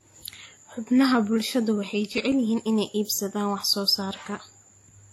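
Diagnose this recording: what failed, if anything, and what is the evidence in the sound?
Codec stage: transcoding between lossy codecs. Throughout the speech there is no energy above 18.4 kHz, and two different kinds of coding damage sit on top of each other rather than one consistent codec signature. This is likely a re-encode chain, pointing to an older WMA-style encode at a modest bitrate later re-encoded as HE-AAC. The second encoder spent bits reproducing the first encoder's artefacts and added its own. A single low-bitrate encode would show only one artefact character, not this layered mix.

Storage/playback stage: CD scratch ticks. From 1.9 to 2.6 s there are six short ticks, the longest a few milliseconds. They recur at roughly seven a second, uneven in strength. That steady spacing follows the disc's rotation. Each time the blemished spot passed the pickup, the data loss exceeded what error correction could rebuild, so the player interpolated or muted those samples. 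Random digital clicks or vinyl crackle would not keep a regular rotational spacing.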